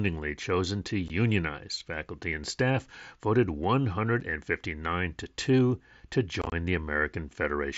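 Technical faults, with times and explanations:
1.08 s, 4.20 s and 6.42–6.52 s: unconcealed Bluetooth headset packet loss. Headset-to-phone packets went missing and silence or an idle pattern replaced them. The gaps of 15 ms and 7.5 ms have abrupt edges. The last gaps scatter over 105 ms, longest 22.5 ms, sounding chopped.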